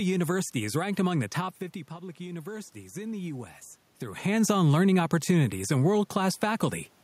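From 1.88 to 3.54 s, automatic gain rising: after the voice falls by about 13 dB as the talker moves back, the control lifts its gain by about 4 dB over that stretch. Unlike that movement, the room noise swells with the voice.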